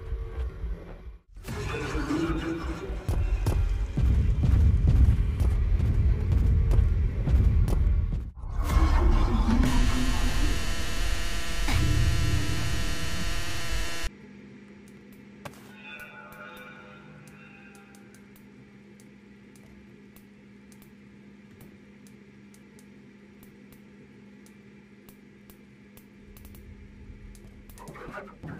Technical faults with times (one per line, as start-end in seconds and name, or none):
2.50-2.88 CD scratch ticks